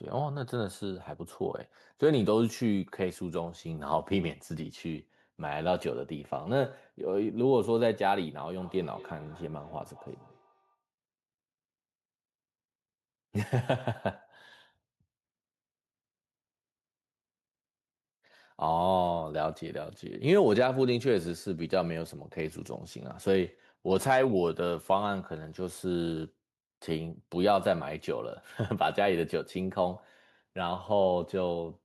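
Speech, with a feedback echo between two devices from 8.54 to 10.82 s: the sound comes back about a fifth of a second later, peaking at about -25 dB relative to the speech. On a spectrogram, faint copies of the speech patterns trail the originals by that regular offset; the waveform shows small duplicate bursts after each phrase. This points to two devices in one room on the same call, where one device's microphone picks up the other's playback, which its own echo canceller does not remove.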